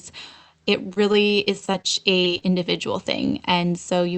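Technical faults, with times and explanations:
0.93–1.86 s, repeated packet loss (robotic sound): seven gaps, none over 28 ms, were filled by extending the last sound. About 15% is patched, so the speech turns choppy and robotic.
2.24–2.28 s and 2.38–2.43 s, short concealed packet loss: 20 ms went missing each time and was bridged with continued sound, causing brief smears or wobbles.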